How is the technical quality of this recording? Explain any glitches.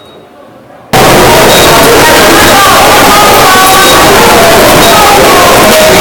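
Quality falls apart early: from about 0.93 s to the end, the audio turns into very loud, harsh distortion. The likely cause is signed and unsigned mixed up, where the 8-bit samples get read with the wrong sign convention so the top bit flips. Every time the waveform crosses zero it jumps across the whole range, which is why quiet stretches come out as loud as everything else.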